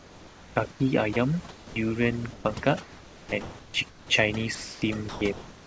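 From start to finish there's overdone noise removal. The suppressor is clamping bands near its noise estimate, so the background drops and breaks up into twinkly specks. From 0 to 1.76 s, and again from 2.33 s to the end, the sound gets chopped by the voice detector, likely the sender's. About 0.95 s and then 1.9 s of it is swapped for comfort noise, so quiet bits drop out.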